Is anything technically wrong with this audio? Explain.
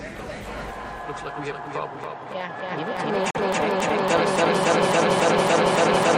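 Yes. There is a digital broadcast dropout from 3.31 to 3.40 s, where the sound drops to silence and then comes back. The receiver stopped getting usable frames and muted until valid data returned, so the material sent during the gap is gone. The missing stretch, roughly 43 ms, fits a single lost frame. Unlike a splice or edit cut, the hole is true silence rather than a jump, with no attempt to fill it.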